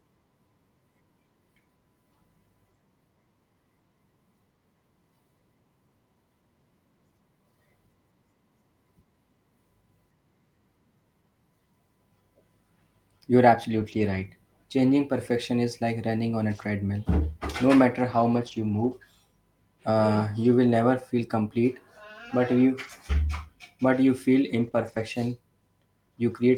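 Lost packets rebuilt from error correction occur at 13.71–14.25, 16.53–16.71, 18.03–18.93, 20.43, 22.83–22.89, 24.55–24.69 and 24.75–25.01 s. Low-bitrate backup copies replace the missing audio, so there's no gap, but these stretches sound rougher and grainier. On a spectrogram they show blurrier harmonics and more noise between them. A short concealed packet loss sits at 24.71–24.75 s: the decoder extends the preceding sound, giving a brief smear, seen as flattened, stretched harmonics and a smoothed waveform.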